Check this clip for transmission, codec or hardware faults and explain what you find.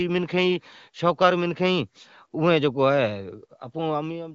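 No transmission, codec or hardware faults are audible here.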